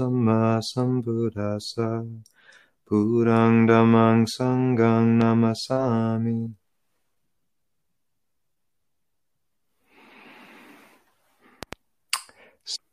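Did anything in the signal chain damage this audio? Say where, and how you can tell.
Yes, two loud pops, most likely from the analogue wiring stage: a single pop at 5.21 to 5.24 s and a double pop at 11.63 to 11.75 s, each about 10 dB above the signal. The sound continues underneath, unlike a dropout, pointing to a voltage pulse added by a plug, switch or static discharge.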